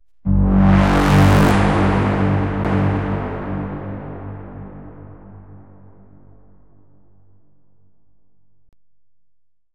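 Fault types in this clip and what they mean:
CD skip: A knock or a flaw made the laser jump off its track and land on a different turn of the disc's spiral. Playback drops out for a moment, then resumes from another spot. It happens twice here. At 2.64 s there is a mute of only a few milliseconds. From 8.69 to 8.73 s the gap is longer, around 40 ms. After each gap the sound jumps forward or back by one or more disc turns.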